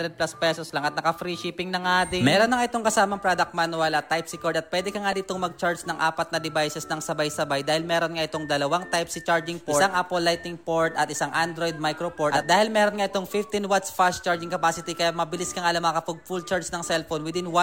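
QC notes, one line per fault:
0.67–0.70 s, lost LE Audio frames: about 22.5 ms dropped, which fits three 7.5 ms frames. The decoder repeats the last spectrum with scrambled signs, so the sound briefly smears into noise.
5.12 s, lost LE Audio frames: a single 7.5 ms gap, likely one frame. The concealment fills it with a sign-scrambled copy of the previous spectrum, heard as a tiny noisy blip.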